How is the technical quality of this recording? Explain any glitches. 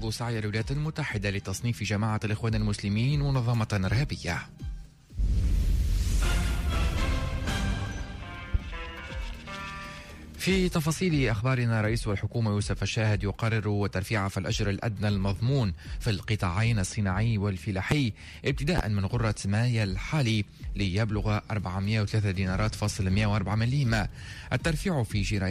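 Three loud pops mar the recording, at 8.54–8.57 s, 17.91–17.94 s and 18.78–18.81 s. A sudden voltage pulse, likely from a plug, switch, static or driver glitch, entered the signal chain. Each is heard as a single sharp pop lasting about 30 ms, about 15 to 20 dB above the sound, which continues underneath.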